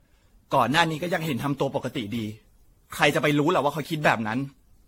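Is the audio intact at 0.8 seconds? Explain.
No. At 0.8 seconds, as throughout the speech, the sound carries generation loss, likely from about ten successive AAC-style encodes at a rate that fits roughly 64 kbit/s. Each pass requantises on a shifted frame grid, so noise and spectral gaps pile up: consonant attacks blur, the voice turns swirly and hollow, and nothing is left above 16.6 kHz. A single low-bitrate encode would sound cleaner than this for the same bandwidth.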